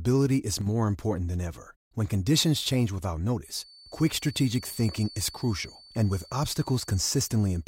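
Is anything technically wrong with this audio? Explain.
Yes, there are two faults.

From 0.61 to 0.67 s, one channel drops out for about 53 ms. The level falls abruptly by about 6 dB, likely because one stereo side went silent before the mono sum, leaving only half the shared signal. The waveform shows a brief, sharp step down in amplitude.

From 3.41 s to the end, a feedback whistle sits behind the speech. It is a thin, steady 4.5 kHz tone, roughly 25 dB below the speech, and it swells and fades slowly in level. The likely cause is a loudspeaker-to-microphone loop held just short of runaway feedback. On a spectrogram it appears as an unbroken horizontal line at 4.5 kHz.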